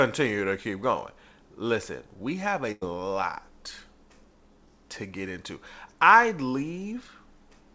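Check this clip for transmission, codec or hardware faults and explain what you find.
There's one transmission fault here: a burst of packet loss from 2.72 to 2.83 s, just after "we have". The receiver stretched and faded the last bit of sound for about 94 ms, then picked up about 100 ms further along, so that stretch of speech is simply gone. It all went through a call path with nothing above 8 kHz, which fits G.722 at 64 kbps.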